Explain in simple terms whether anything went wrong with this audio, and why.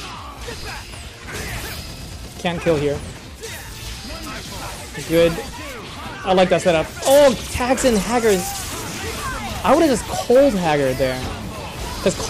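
Some part of the recording chain was sent a signal louder than it could handle, so the tops of the loudest moments were sliced off flat. This is hard clipping. Those flattened peaks add a crackle that wasn't in the original sound. It happens at 2.46 to 2.73 s, 6.30 to 7.29 s (the worst and longest), 9.65 to 9.93 s, and 10.30 to 11.03 s.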